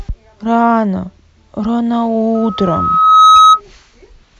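At 2.35 s a loudspeaker feedback squeal begins and lasts until 3.61 s. The microphone was picking up its own loudspeaker, and at 1.3 kHz the loop gain rose above one, so that single frequency fed itself and swelled over about a second into a piercing tone roughly 10 dB louder than the speech. On a spectrogram it shows as a thin horizontal line at 1.3 kHz that brightens steadily. On the waveform the envelope balloons into a dense, uniform band.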